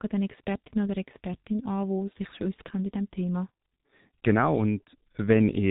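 From start to finish the speech sounds muffled and hoarse, with consonants smeared together and nothing audible above 3.8 kHz. This is heavy G.723.1 codec damage: its 30 ms frames and slowly updated voice model blur rapid detail, which fits a bitrate near 6.3 kbit/s.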